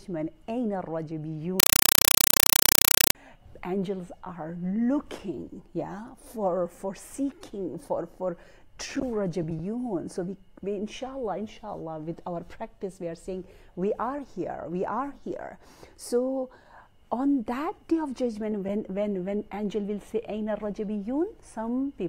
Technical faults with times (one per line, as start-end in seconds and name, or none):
1.60-3.15 compressed stream played as audio